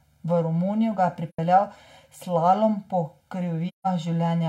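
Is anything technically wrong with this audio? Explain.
Yes. Channel delay (comb filtering) runs throughout: one channel lags about 1.5 ms, and the mono sum cancels at evenly spaced frequencies from about 400 Hz. This gives a fixed hollowness, not a sweeping phaser effect.

AAC frame loss with muting occurs from 1.29 to 1.39 s, just after "ga je", and again from 3.68 to 3.87 s. The decoder zeroes missing frames, so roughly 85 ms and then 170 ms fade out and back in. Those lengths fit two and four lost frames, and the gaps are soft-edged.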